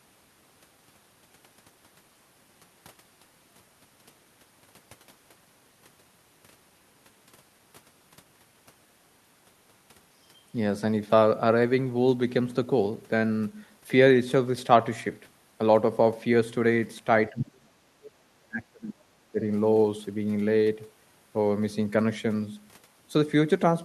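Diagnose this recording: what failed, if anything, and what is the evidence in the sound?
Call processing, speech suppressed in double talk: the talker's speech drops sharply from 17.3 to 17.84 s, 18.41 to 19.12 s and 19.32 to 19.4 s, by roughly 35, 30 and 15 dB. The echo canceller likely mistook simultaneous far-end speech for echo and attenuated both.

Call processing, the other side's voice leaking through: a brief scrap of a second voice appears from 18.04 to 18.11 s, about 25 dB below the talker. This is likely loudspeaker playback picked up by the microphone that the echo canceller failed to fully remove.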